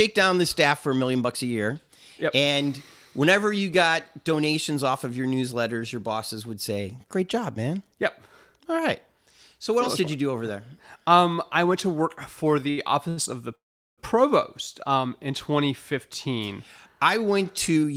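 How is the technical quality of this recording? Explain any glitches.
The recording has network delivery problems in its last few seconds: two brief stalls, a longer freeze, and a short stretch of hurried speech.

Short stalls from late packets occur at 12.70 s, just after "went to work for", and at 13.09 s, just before "of the". Each time a packet arrived late, the jitter buffer ran dry, so the receiver held the last sound for about 69 ms and then 78 ms, giving a drawn-out, faintly buzzy sound before the speech resumes with nothing lost.

A call audio freeze runs from 13.55 to 14.00 s. Packets were likely held up in transit, so the last sound carries on briefly as a fading buzz and then drops to silence for about 390 ms of the 427 ms gap. The speech picks up where it stopped, so a pause has been inserted.

A jitter buffer speed-up affects 17.70 to 17.93 s, just after "I went". With surplus audio queued, the receiver trimmed tiny pitch-period slices, roughly 40 ms in total, so the speech plays at 113% speed with its pitch unchanged and sounds rushed.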